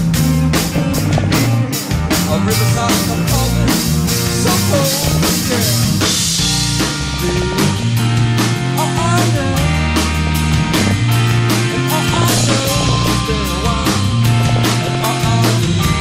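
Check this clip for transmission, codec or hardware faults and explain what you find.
The clip has DAB burbling in six bursts: 0.54 to 1.54 s, 4.80 to 5.33 s, 6.95 to 7.88 s, 10.27 to 10.99 s, 12.13 to 13.12 s and 14.39 to 15.09 s. Each lasts roughly half a second to one second. Weak reception lets bit errors slip past error correction into the MP2 data. Corrupted samples put short blips of noise in single sub-bands, and corrupted scale factors make sub-bands leap in level for up to a frame. The result is short noise blips and sudden level jumps over the sound.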